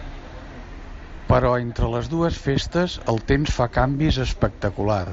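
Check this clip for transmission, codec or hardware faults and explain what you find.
Two brief dropouts in the speech have been smoothed over by concealed Bluetooth headset packet loss. At 1.17 s a gap of about 15 ms, consistent with two lost headset frames, passes as a buzzy tone with a small warble as real audio resumes. At 3.27 s, between "les dues festes el" and "temps fa", a 7.5 ms gap that fits a single lost frame is almost hidden. In both, the receiver filled the missing stretch by repeating the best-matching piece of recent waveform. The surrounding audio carries the light graininess of the mSBC wideband codec.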